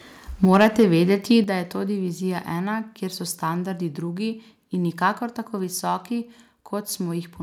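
Microphone overload from 0.43 to 1.13 s in this speech recording gives the loudest syllables a harsh, crackling edge just before "da je to". The peaks likely drove the converter about 5 dB past full scale, flattening their tops on roughly two percent of samples. A microphone volume step-down follows at 0.45 s (about 3 dB) and again at 1.44 s (about 7 dB, right before "da je to"). Voice and background both drop abruptly, likely because the call software reacted to the distorted peaks by lowering the input gain.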